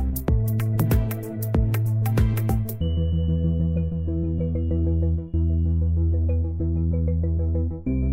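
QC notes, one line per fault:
No faults found on listening; nothing to log for this clip.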